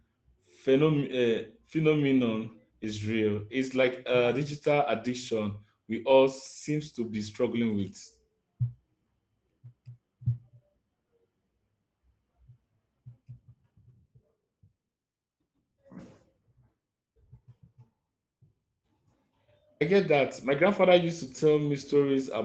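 Nothing goes wrong anywhere in this speech; it has just come through an ordinary call connection, and the top end stops at about 8 kHz, which fits an Opus codec running at a modest bitrate of around 24 kbps.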